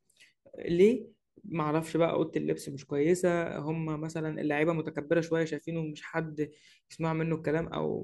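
No technical faults are audible anywhere in this recording.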